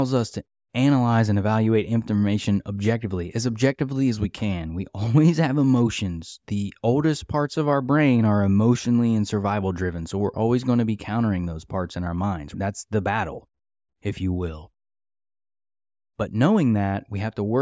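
Nothing in the recording stood out as a technical problem on listening.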